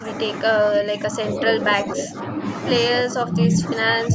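At 0 to 0.06, 0.77 to 1.38, 1.81 to 2.39, 3.07 to 3.62 and 4.08 s onward, the speech dips by up to about 10 dB (about 5 dB in the second), likely speech suppressed in double talk. Unlike clean dropouts, it ducks partially and unevenly rather than going silent.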